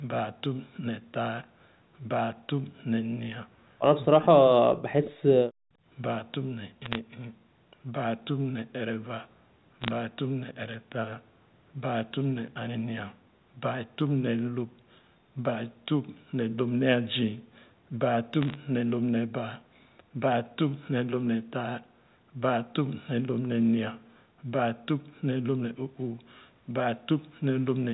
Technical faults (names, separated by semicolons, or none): bit errors on a digital phone line